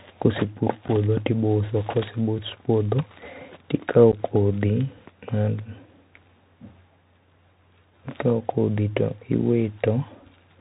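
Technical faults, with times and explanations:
Throughout: Bluetooth CVSD headset codec. The speech rides a narrowband 64 kbps link that sends one up-or-down bit per sample, so nothing above 4 kHz gets through. The adaptive step lags behind fast, loud detail, making sibilants scratchy over a grainy hiss.
0.88 s and 4.12–4.14 s: unconcealed Bluetooth headset packet loss. Short holes of about 7.5 ms and 11.2 ms, which points to a couple and then a few lost packets. Nothing fills the gap, so the speech drops out abruptly with hard edges and returns briefly quieter.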